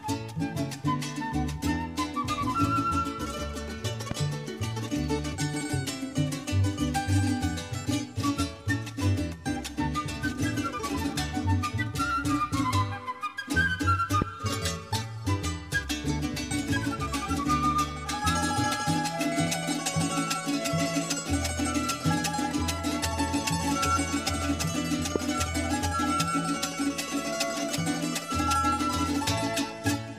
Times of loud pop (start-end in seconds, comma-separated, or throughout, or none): 4.11-4.13, 14.22-14.24, 25.16-25.18